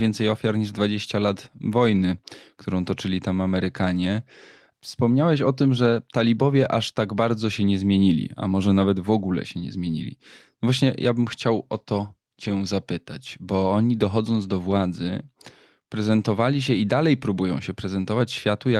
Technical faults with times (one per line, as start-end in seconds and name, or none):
12.44-12.50 lost packet rebuilt from error correction
14.70 lost packet rebuilt from error correction